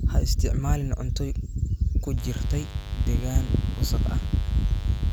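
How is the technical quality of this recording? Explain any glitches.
A mains buzz enters at 2.17 s and runs to the end of the speech. Switching spikes, twice per 50 Hz cycle, inject harmonics climbing into several kHz, heard as a steady raspy buzz roughly 20 dB under the voice. A spectrogram shows evenly stacked horizontal lines at 50 Hz spacing.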